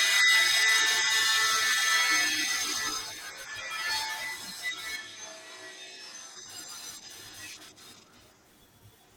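From 4.98 to 6.34 s the speech turns abruptly roomy and hollow, loses bass, drops about 5 dB and gains faint background noise, likely a switch to a distant microphone. Unlike added reverb or filtering, the change arrives and reverts instantly.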